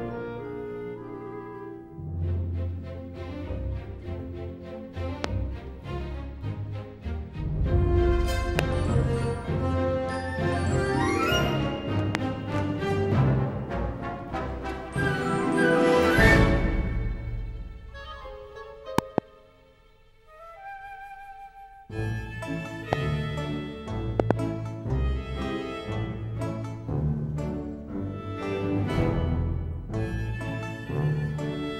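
The audio carries a series of loud pops on top of the sound, which continues underneath each one. Single pops fall at 5.24–5.27, 8.59–8.61, 12.15–12.17 and 22.93–22.95 s. Double pops occur at 18.98–19.20 and 24.20–24.33 s. Most stand roughly 25 dB above the signal, and the one at 22.93 s about 20 dB. Each is a sharp transient added to the signal. The likely cause is a voltage step or pulse from a plug, switch, static or driver glitch.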